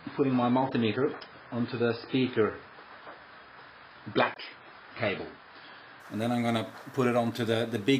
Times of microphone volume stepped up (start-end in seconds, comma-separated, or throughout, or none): none